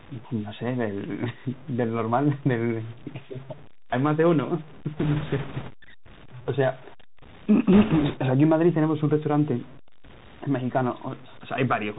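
Low bit depth without dither runs through the whole clip: the speech carries a gritty, grainy distortion that follows the sound and sits only around 25 dB below it. The likely cause is coarse truncation to about seven bits with no dither, so quiet passages crumble rather than fade smoothly.

Bluetooth CVSD headset codec damage is also present from start to finish, consistent with a 64 kbps CVSD headset link. Nothing reaches above 4 kHz, sibilants come out scratchy, louder bright sounds overrun the adaptive step and distort, and a granular hiss lies beneath the speech.

Bit errors on a Bluetooth voice link appear from 4.97 to 5.70 s and again from 7.73 to 8.17 s. Flipped bits in the one-bit stream produce a rushing crackle rather than sharp clicks. The second burst, at a higher error rate of several percent, sounds rougher.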